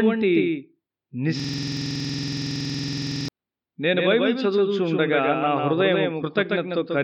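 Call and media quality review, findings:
Doubled audio track, throughout: likely a second, slower capture path mixing in a copy. Full-band echo roughly 150 ms late, about 5 dB down, no room decay.

System hang loop, 1.40 to 3.28 s: host or driver froze while hardware kept cycling its ring buffer. A 46.44 ms segment repeats dozens of times, a 21.5 Hz buzz fitting a 2048-sample buffer.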